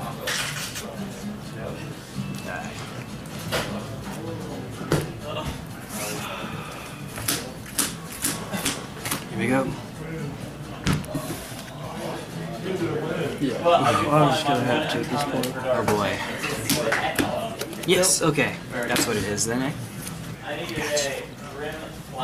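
Short chirps or squawks break through at 0.79, 14.96 and 18.14 s: damaged data in a compressed stream, where corrupt frames make the decoder misread and lose sync.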